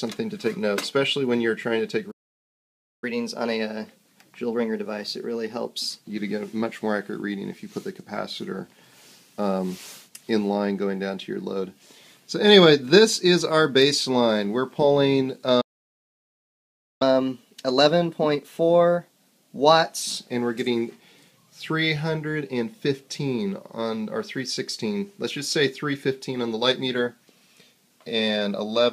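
The audio has two playback stalls followed by catch-up at higher speed. At 2.11 s the output goes silent mid-flow for about 0.91 s, resuming at 3.04 s. At 15.61 s it drops out again for about 1.39 s, resuming at 17.02 s. Each gap is most likely the player running short of buffered data or having its output thread blocked, so nothing reaches the device until it recovers. After each stall comes catch-up at higher speed. From 3.04 to 6.04 s, and again from 17.02 to 20.02 s, the player resamples its backlog to run at 1.1 times normal speed. That raises the pitch by about a semitone and a half and audibly quickens the pacing. After three seconds it drops back to normal rate, having recovered part of the lost time.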